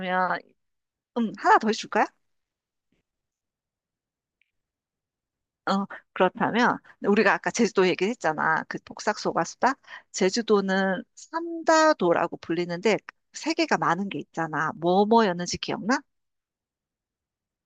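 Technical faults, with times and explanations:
5.69 s, 13.43 s and 14.77 s: dropped samples. Each is one sharp click with a thin vertical line across the spectrum, likely from a few samples going missing so the waveform jumps ahead by a fraction of a millisecond. Unlike a dropout, no audible sound is lost.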